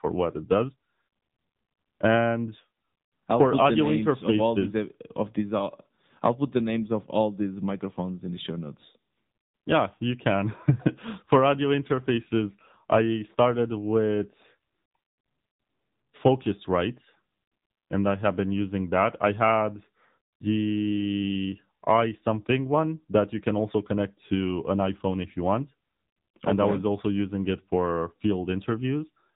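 Throughout, the speech carries AMR narrowband mobile codec damage: nothing passes above 3.8 kHz, and the plainly buzzy, synthetic voicing points to a low mode near 8 kbps.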